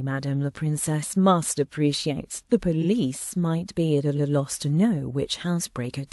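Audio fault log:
2.81–2.86 s, repeated frames: a 46 ms block plays twice, which fits one compressed frame being sent again. The sound stutters briefly and runs 46 ms longer.
4.16–4.30 s, repeated frames: a 139 ms block, about three frames' worth, replays once. The stutter is longer, adding 139 ms.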